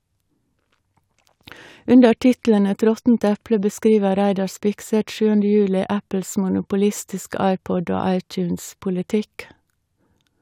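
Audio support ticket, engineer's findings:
No faults found on review of the speech clip. Nothing in the audio points to a failing component in the chain.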